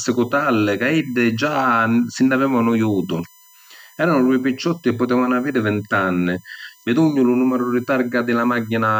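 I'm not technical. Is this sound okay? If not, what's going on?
No. Underneath the speech, all the way through, there's a thin, steady whistle known as USB whine. It comes from a USB connection whose power use pulses a thousand times a second, and that electrical rhythm leaks into the audio as a fixed-pitch tone, built on 1 kHz and loudest very high up, around 15 kHz. Unlike mains hum, which is a low drone, this is high-pitched, and it sits well below the speech.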